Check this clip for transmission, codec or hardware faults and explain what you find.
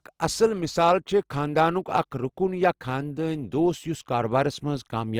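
One codec fault runs through the whole recording: the speech carries the grainy, roughened texture of Opus compression. In its music-oriented CELT mode, Opus preserves each band's overall energy, but with few bits it fills the fine detail by copying lower bands or injecting noise. The voice therefore turns rough and gritty rather than hollow. The damage is plainly audible, and the texture most likely comes from Opus coding at a low rate consistent with about 24 kbps. Unlike MP3, there is little swirling or warbling, because the spectrum has few holes punched in it. The bandwidth also stays full, with content reaching about 20.3 kHz, so it does not have the muffled sound of speech-mode coding.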